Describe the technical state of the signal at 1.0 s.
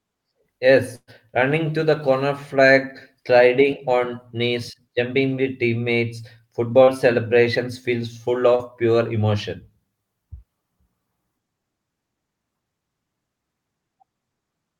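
At 1.0 s the signal is inside a burst of packet loss running from 0.95 to 1.10 s. About 120 ms of audio never arrived. The receiver covered the gap by extending the last received sound while fading it down, then briefly dropped to silence before the audio resumed just ahead of "running to". This is heard as a held, dimming buzz or hiss followed by a jump. On a spectrogram it appears as smeared, static horizontal bands tapering off, then a short blank column before normal structure returns.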